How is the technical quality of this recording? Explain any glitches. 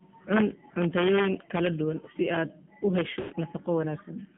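The quality is poor, with constant mobile-codec damage and two dropouts. This is AMR narrowband mobile codec audio. The band runs only from 150 Hz to 3.4 kHz. The buzzy, synthetic texture points to a low rate near 7.4 kbps.

Lost AMR speech frames appear at 1.46 to 1.50 s, a brief warble lasting 20 ms. The decoder repeats the last good settings at reduced gain. At 3.20 to 3.34 s, a longer 120 ms gap, fitting about six lost frames, drags out and fades toward silence before the speech returns rough.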